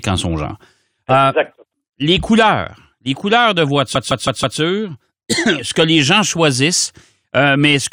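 From 3.95 to 4.59 s, repeated frames make the speech stutter. A 160 ms block plays four extra times, adding 640 ms.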